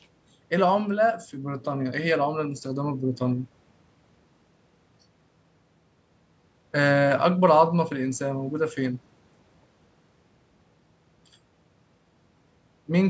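No technical faults can be heard in the speech; it carries the usual signature of call microphone processing, with the lowest bass trimmed and nothing above 8 kHz, which is expected for that path.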